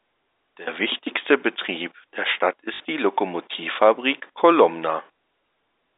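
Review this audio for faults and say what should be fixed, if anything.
At 2.74 to 2.8 s there's a short robotic stutter from packet loss with the last packet repeated. About 60 ms went missing, and the receiver kept replaying the last packet, which fits 20 ms packets. The repeats buzz around 50 Hz, sitting on top of the band-limited G.711 telephone sound. Proper packet loss concealment or a deeper jitter buffer would smooth over gaps like this.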